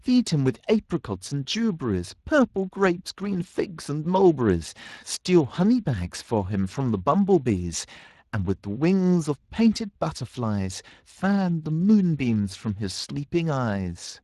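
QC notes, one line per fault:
Throughout: Speex codec, plainly audible hoarse, noisy grain on the speech from starved CELP excitation at a setting near 22 kbps; spectrogram shows smeared, grainy harmonics.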